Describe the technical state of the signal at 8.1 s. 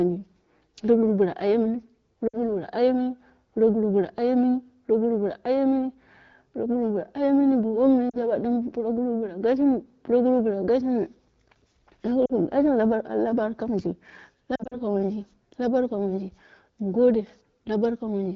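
Lost AMR speech frames occur from 8.10 to 8.17 s, a 40 ms gap consistent with two consecutive frames failing their checksum. The AMR-WB decoder conceals the gap by repeating the last good pitch and vocal tract parameters while ramping the gain down. The result is a brief fade to near silence rather than a clean dropout, and the speech resumes sounding momentarily weak or rough before the 12.65 kbit/s-like wideband coding sounds clear again.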